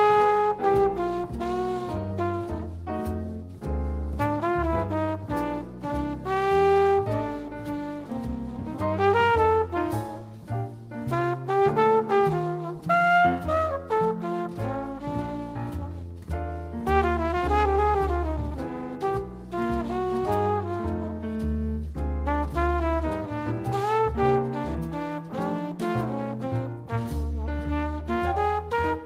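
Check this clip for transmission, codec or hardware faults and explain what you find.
No transmission, codec or hardware faults are audible anywhere in the clip.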